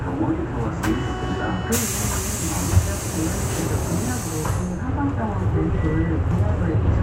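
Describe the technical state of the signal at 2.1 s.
At 2.1 s the signal is intact, with no technical fault present at that moment.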